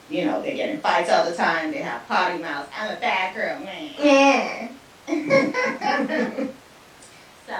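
No audible technical faults anywhere in the speech recording.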